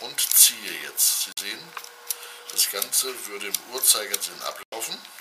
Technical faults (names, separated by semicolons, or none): Bluetooth dropout